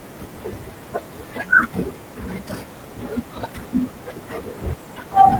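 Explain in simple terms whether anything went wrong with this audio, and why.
Listening to the speech recording, nothing stood out as having gone wrong at any point.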